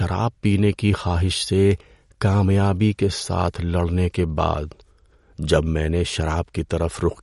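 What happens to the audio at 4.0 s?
MP3 compression affects the speech at 4.0 s, as it does throughout the clip. Nothing sounds above 11.2 kHz and the texture is plainly watery, likely from an encoder starved of bits, near 48 kbps, cutting the treble and switching weak frequency lines on and off between frames.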